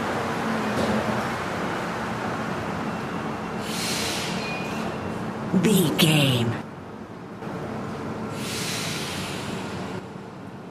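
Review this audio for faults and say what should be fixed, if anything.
The level drops abruptly by about 6 dB from 6.62 to 7.42 s, and again from 9.99 s to the end. The likely cause is one channel dropping out, halving what both channels shared after the mono sum. Check stereo cabling and channel routing before mixdown.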